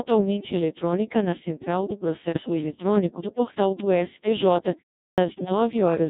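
Throughout the clip the speech carries the signature of the Codec 2 vocoder, with heavy codec damage. The robotic, buzzy timbre fits the 1.6 kbit/s mode. At that rate the decoder receives only pitch, voicing, energy and a coarse spectral envelope per frame and rebuilds the voice from summed sine waves, so the original waveform never reaches the listener. Natural breathiness and fine texture are gone, leaving a synthetic, reedy tone.

From 2.29 to 2.50 s, between "eletrônica na central do" and "eletrônico do portal do", bit errors on digital voice radio break up the signal. The error rate sounds fairly high, on the order of a few percent. At this vocoder rate each corrupted bit misdirects a whole frame's pitch, level, voicing or spectral shape. The result is a short burst of warbling, jumping pitch and level, and garbled, bleepy noise. The length suggests about five frames were hit.

At 5.11 s, after a pause of about 0.36 s, there is a clipped start after a pause. 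The output path has dropped into an idle state during the silence and takes about 69 ms to come back, so the onset of the next sound is swallowed and it begins abruptly.

Almost immediately afterwards, from 5.28 to 5.52 s, a second burst of bit errors on digital voice radio appears. The error rate is lower here, roughly 2 percent, but it spans somewhat more audio, consistent with around seven frames. It produces the same pitch lurches, tonal shifts and robotic gibberish.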